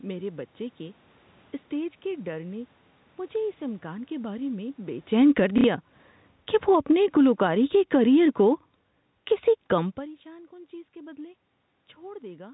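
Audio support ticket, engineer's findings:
Automatic gain falling, 3.34 to 9.53 s: level sinks about 12 dB, room noise sinking with it, ending just before "کم پریشان کن چیز". AGC stage lowering gain after loud input or strong background noise. Waveform shows a steady envelope taper, not the step of the talker moving around 5 s.

Packet loss with last packet repeated, 5.58 to 5.64 s: 60 ms robotic stutter, consistent with two lost packets. Jitter buffer concealment replaying the last packet. Spectrogram shows a repeated identical slice.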